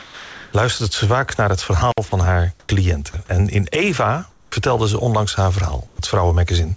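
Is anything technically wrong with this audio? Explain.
Yes, there are three kinds of fault.

From 0.00 to 0.53 s the opening is a sound dropped by the voice detector: steady synthetic noise stands in for the real signal, swallowing about 290 ms of actual sound. The likely cause is a detector that judged the onset as background and stopped sending until it triggered.

At 1.91 to 1.98 s there is an intermittent contact: the signal cuts out for about 54 ms, with crackle at both edges and faint hiss while the connection is open, as a loose plug or cable would produce.

Comfort noise in place of the background appears at 2.60–2.69 s, 4.31–4.52 s and 5.87–5.99 s. The background, about 35 to 38 dB below the loud parts, turns into flat, featureless noise that is about 3 dB louder in the first gap, about 5 dB quieter in the second and about 1 dB quieter in the third. This is likely discontinuous transmission, with the receiver synthesising noise during pauses. 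The band ends at 8 kHz, which points to a wideband call codec such as G.722.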